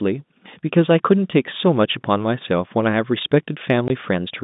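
At 3.88 to 3.90 s the speech drops out for 20 ms. This is packet loss filled with silence. A stretch of audio never arrived, and the receiver played nothing in its place. The gap's length fits a single lost 20 ms packet. The edges are abrupt. The line itself carries the narrow telephone band of G.711 coding, roughly 150 Hz to 3.7 kHz.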